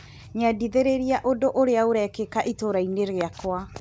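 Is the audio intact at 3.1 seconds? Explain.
Yes, the audio is intact at 3.1 seconds: the speech there runs unbroken, carrying only the ordinary coding noise and the missing content above 8 kHz that come from passing through a G.722 call path.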